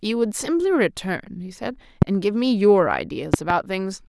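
A sudden voltage step, likely from a plug, switch or static discharge, lands on the signal path and is shaped by the circuits after it, producing a loud pop. The first runs from 2.02 to 2.05 s as a single sharp thump, about 20 dB above the speech, which carries on underneath. From 3.34 to 3.53 s a second disturbance gives two pops in quick succession at a similar level.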